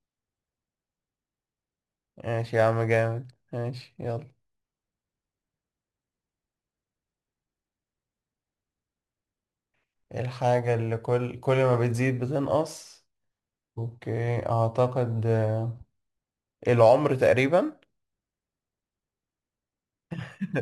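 It's a speech recording with crude rate conversion running through the whole thing. The grit sounds like someone took it from 44.1 kHz to 48 kHz by just repeating the nearest sample, with no interpolation or filtering. That repeat pattern throws off shifted, inharmonic copies of the voice, sitting very roughly 30 dB under it, so you hear a faint inharmonic fizz riding along with the louder and brighter parts of the speech.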